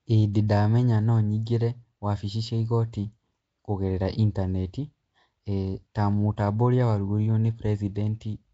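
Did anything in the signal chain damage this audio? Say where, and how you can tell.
Yes, at the codec stage, throughout the clip. The speech carries a rough, hissy halo and a smeared, underwater quality, with nothing above 7.8 kHz. This is likely Nellymoser compression, whose fixed bit budget leaves weak bands noise-filled, which fits roughly 32 kbps.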